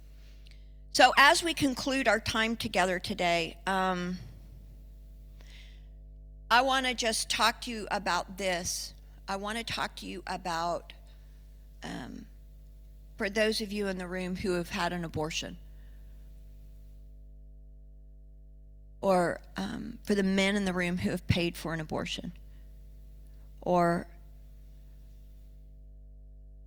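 Mains hum runs through the whole speech recording, a steady low tone at 50 Hz that sits under every phrase and persists in the pauses. It comes from the power line leaking into the signal path, typically through a ground loop between connected devices or magnetic coupling from a nearby transformer. Here the hum is strong, around 20 dB below the speech, so it is clearly audible as a constant drone beneath the talker.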